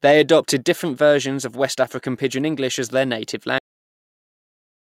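Cut-off end at 3.58 s: the speech halts mid-sound and falls straight into digital silence with no natural decay. The final stretch of audio was never written or played out, so the remaining 1.28 s to the end holds nothing at all.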